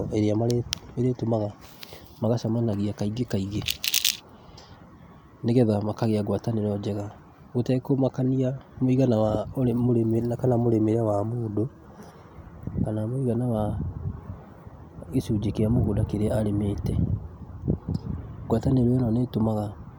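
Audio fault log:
Nothing stood out on listening to this speech recording.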